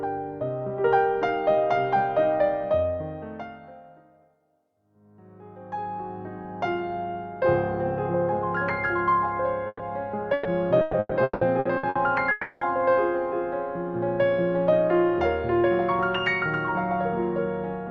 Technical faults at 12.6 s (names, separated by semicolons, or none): long network dropout